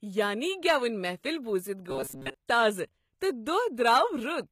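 Throughout the speech, treble is bright but gritty and lispy on s sounds, likely HE-AAC compression at a low bitrate, rebuilding highs by copying lower bands rather than simply dulling them. From 1.90 to 2.34 s, a rigid metallic buzz at 134 Hz replaces most of the real audio, likely robotic sound from repeated short buffers looping about 7.5 ms, unlike codec warble, which has no fixed pitch. At 2.47 s, a brief hiss of about 16 ms precedes a sharp attack and softens it. This is pre-echo, with quantisation noise leaking ahead of the onset rather than trailing after it.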